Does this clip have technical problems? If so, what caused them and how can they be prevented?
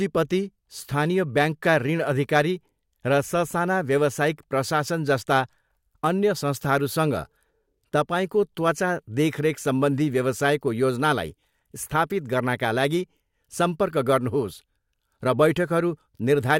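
Yes. From 2.36 to 2.39 s the speech shows hard clipping: peaks overdriven by about 3 dB hit the ceiling and are cut flat, adding a brief crackle of high harmonics. The flat, abrupt edge separates it from soft saturation's rounder distortion. Leave more headroom by lowering input gain before conversion.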